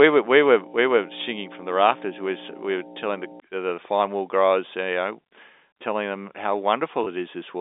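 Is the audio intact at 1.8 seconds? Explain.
No. From 0.0 to 3.4 s, ending just before "the fine wool growers", mains hum sits under the speech: power-line interference coupled in as a steady 60 Hz tone, roughly 10 dB below the speech. Its fixed pitch and constant level set it apart from irregular low rumble.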